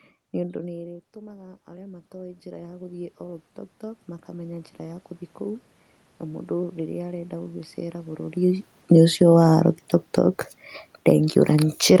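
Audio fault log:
0.44 to 5.67 s, automatic gain rising: just after the talker moves back from the microphone, the input falls by about 21 dB, and the automatic gain control slowly pushes its gain up by about 17 dB over roughly five seconds. Speech and room noise swell together, so the room noise climbs along with the speech. On the waveform the envelope rises steadily across the span. On a spectrogram the noise floor between syllables brightens along with the speech.
10.81 to 12.0 s, automatic gain falling: the input is too loud, or its background too strong, for the gain in use, and the gain control responds by pulling its gain down gradually through the last second of the clip. Speech and background sink together rather than the speech alone fading. On the waveform the peaks start large and taper toward the end. On a spectrogram the whole band, including the room noise floor up to the call path's upper limit near 12 kHz, dims in step.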